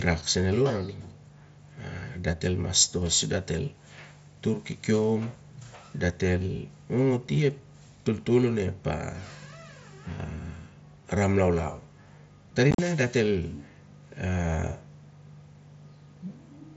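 Around 12.71 to 12.79 s the speech breaks into abrupt holes. The longest gap is about 37.5 ms, and about 60 ms is missing across 75 ms. This is unconcealed Bluetooth headset packet loss: several short packets on the mSBC link never arrived, and silence or an idle pattern replaced them.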